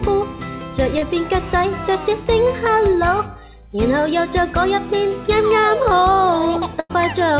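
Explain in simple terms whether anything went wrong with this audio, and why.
Yes, two things go wrong. Around 0.98 to 1.04 s there is a brief smear, like a tiny wobble in the sound. This is short concealed packet loss: about 40 ms of audio arrived too late, so the receiver guessed by stretching the last sound and then blended back.

Near the end, from 6.80 to 6.91 s, the sound turns into a short held buzz or fading hiss, then jumps ahead. This is a burst of packet loss: about 100 ms went missing in a row, and the receiver filled the gap by repeating and fading the last sound, so that stretch is simply gone.

Throughout, nothing is heard above 4 kHz, which fits a standard narrowband telephone codec.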